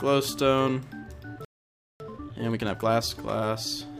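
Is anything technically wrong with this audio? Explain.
Yes, there are two faults. From 1.45 to 2.0 s there is a playback stall: the player likely ran short of data or had its thread blocked. The output goes silent for about 0.55 s, cutting the sound off mid-flow before it resumes.

From 2.0 to 3.1 s comes time-compressed catch-up. The player works off the backlog left by the stall by removing small slices and cross-fading across the gaps. For that stretch the audio runs at 1.5 times normal speed, rushed but at unchanged pitch.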